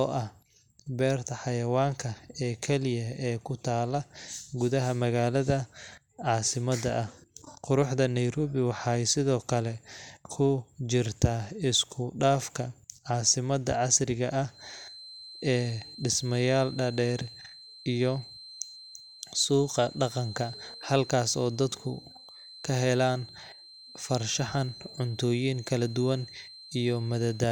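From 14.47 s to the end, a thin, steady feedback whistle at 4.1 kHz sits about 20 dB below the speech, swelling and fading slowly in level. Its likely cause is a loudspeaker-to-microphone loop held right at the edge of feedback. Unlike a runaway howl, it never builds.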